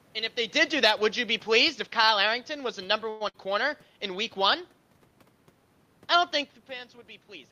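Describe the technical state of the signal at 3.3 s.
At 3.3 s the speech briefly turns into a held, fading smear of its last sound, then jumps ahead. This is a burst of packet loss from 3.28 to 3.37 s. About 55 ms was filled by extending and fading the preceding sound, and roughly 60 ms of speech never arrived, so the audio resumes slightly further on.

Just before it, from 3.09 to 3.22 s, a similar 111 ms stretch of continued, fading sound is heard, but nothing is skipped afterwards. That fits a call audio freeze, likely caused by delayed packets draining the jitter buffer. The speech then picks up where it stopped, now running 111 ms later.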